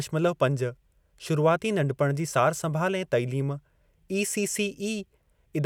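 No technical faults are audible anywhere in it.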